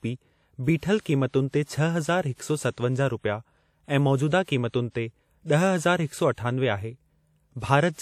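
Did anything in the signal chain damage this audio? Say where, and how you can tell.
Yes. WMA compression damages the speech across the whole clip, at the codec stage: a ringing, washy smear with hiss that swells and fades with the signal. This is likely from a long-block WMA 1 transform encoder at a low rate, consistent with about 48 kbps.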